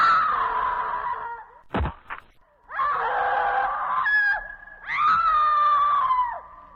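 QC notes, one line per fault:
0.73–0.79 s, 2.95–3.01 s, 5.21–5.24 s: AAC frame loss with concealment. Short smeared, noisy or phasey patches. Each fits one lost 43 ms frame rebuilt from the previous spectrum.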